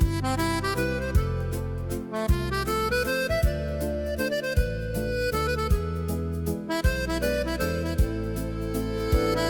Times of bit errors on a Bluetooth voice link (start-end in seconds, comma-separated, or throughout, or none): none